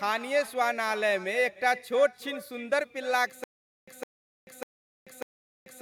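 A speech recording with two faults. The first is echo with no canceller, present throughout. Each phrase returns a fraction of a second later, roughly 300 ms behind. The copy sits about 18 dB below the direct speech. It sounds thinner than the original. That points to a far-end loudspeaker feeding its own microphone, with nothing cancelling the pickup before it travels back. The second fault is a stutter with silent gaps. It begins at 3.44 s and lasts to the end. A fragment of 0.16 s plays, then about 0.44 s of dead digital silence follows. The cycle repeats every 0.6 s, four times over. The speech that should fill those gaps never arrives. The likely cause is a stalled player or stream replaying its last buffered chunk on each retry.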